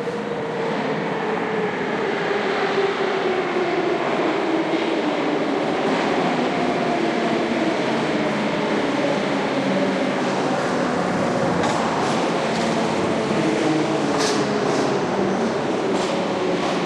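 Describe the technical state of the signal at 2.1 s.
A brief glitch at 2.07 s comes from damaged data in the compressed stream: corrupted bytes made the decoder misread frames and lose sync before relocking.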